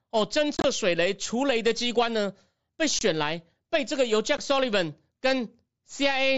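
Around 0.57 to 0.64 s there's unconcealed Bluetooth headset packet loss: gaps totalling 52.5 ms over 75 ms, longest 22.5 ms. Then come a 22.5 ms hole at 2.99 s and a 15 ms one at 4.37 s. Lost packets were never patched over, so the speech simply drops out with abrupt edges, against the mSBC link's wideband sound.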